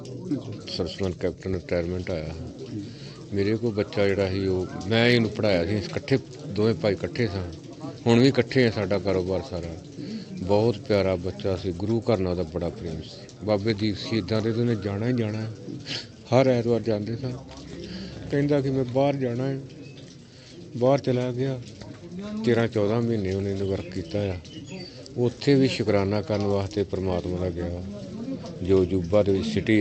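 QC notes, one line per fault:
No faults are heard anywhere in this audio. The WebRTC call path shows in a top end that stops at 8 kHz and in the light coding texture of an Opus link, consistent with a bitrate around 64 kbps.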